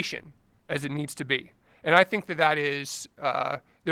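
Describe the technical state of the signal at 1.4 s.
At 1.4 s the speech is intact, with no fault present and only the light coding character of the Opus voice compression carrying it.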